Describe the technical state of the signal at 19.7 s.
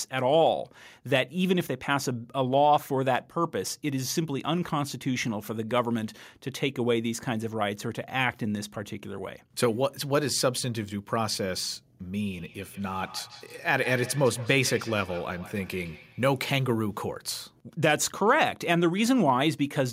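At 19.7 s the speech signal is intact, with no audible technical fault at that moment.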